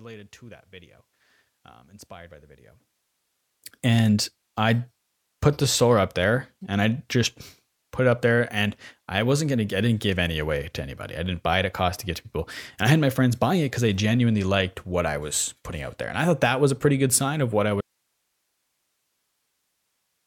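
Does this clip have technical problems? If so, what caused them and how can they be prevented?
Yes. From 0.0 to 3.36 s, up to "and I put the", the speech drops by about 20 dB to a faint copy. That's likely one channel inverted, so the shared centre cancels when the stereo is summed to mono. Check polarity on each channel before any mono fold-down.

At 17.81 s, right after "sign of what I", the speech cuts off abruptly and only a very faint hiss remains, far below the speech level, through to the end. That's likely an audio dropout to a faint residue, where the signal was lost but the path downstream stayed live. Secure cables and connections and monitor the feed while recording.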